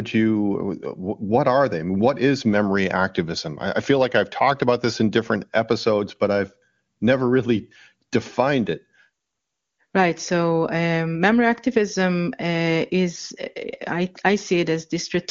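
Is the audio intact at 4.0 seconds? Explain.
Yes, the audio is intact at 4.0 seconds, with no fault at that moment.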